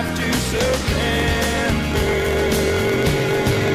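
A steady 45.9 Hz buzz runs throughout, and the sound plays 1.07 times fast. This is a truncated block size mismatch, fitting 1024-sample blocks whose ends are discarded.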